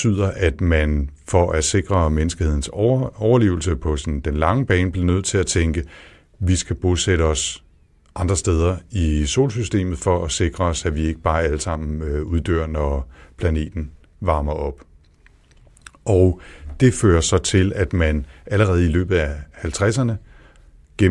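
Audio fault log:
No faults detected in recording.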